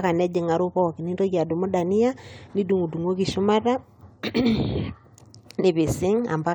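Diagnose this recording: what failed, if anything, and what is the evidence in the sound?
Nothing failed in this recording: there are no dropouts, clicks, clipping, stutters or level jumps anywhere in the signal chain.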